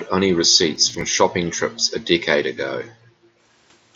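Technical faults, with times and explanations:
0.76–1.01 s, processor overload crackle: for about a quarter of a second the speech breaks into a gritty, tearing crackle. The processor fell behind and missed several audio buffers in a row, around five of them. Nothing was held over for the missed buffers, so each one became a tiny hard-edged gap in the signal. The spacing of the clicks fits buffers of roughly 10 ms. The crackle stops once the processing load eases.
1.77–1.84 s, echo leak: a very brief, faint delayed copy of the speech surfaces, some 35 dB below the main level and trailing it by 457 ms. The likely cause is a far-end loudspeaker whose sound reached that side's microphone without the echo canceller fully removing it, so a scrap of the earlier speech was sent back down the line.
2.90–3.43 s, background gated by the echo canceller: the room sound suddenly sinks, dropping as far as about 40 dB, and stays down for roughly half a second before returning. 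While the loudspeaker side was active, the echo canceller clamped the microphone hard to keep echo out. The ambient background went with it, leaving an unnaturally dead pause that lifts when the canceller releases its hold.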